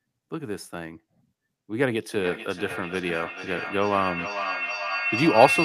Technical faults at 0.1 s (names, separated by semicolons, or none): none